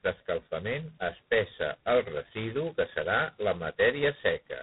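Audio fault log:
throughout: G.726 ADPCM. The speech carries a harsh, rasping hiss that rises and falls with its level, which fits 16 kbit/s, where each sample keeps only two bits of difference from an adaptive prediction and the coarse steps leave heavy quantisation noise. On a spectrogram, a grainy noise floor fills the gaps between harmonics during speech and nothing shows above 3.9 kHz. The waveform looks roughened and stepped wherever the level moves quickly.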